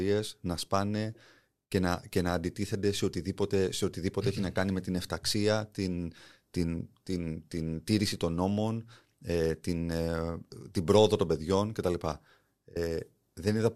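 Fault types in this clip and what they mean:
No fault types are present in this clip.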